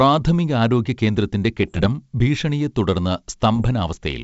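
A speech clip carried over a G.722 wideband link, which sounds clean. Bit errors on an ADPCM link cause pops and rough bursts from 1.62 to 1.89 s, before "ഭീഷണിയെ തുടർന്ന്", and from 3.54 to 3.63 s, after it. Roughly one bit in a hundred flips, knocking the decoder's step size off so each error rings on briefly.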